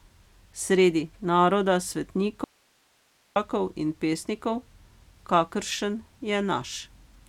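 At 2.44 s the speech drops out abruptly to a faint residue, just hiss sitting roughly 40 dB below the voice, until it snaps back at 3.36 s, about 0.92 s later. The likely cause is the signal feed breaking while the downstream path stayed live.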